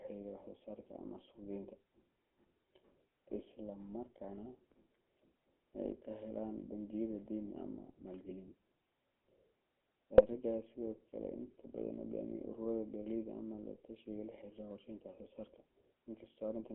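Speech carried through the GSM full-rate codec for its whole length: band-limited to roughly 250 Hz to 3.4 kHz, with plainly audible buzzy, gravelly coarseness consistent with 13 kbps coding. From 10.15 to 10.21 s, GSM bit errors corrupt the decoded parameters, producing a brief squawking burst whose 64 ms length fits about three damaged 20 ms frames.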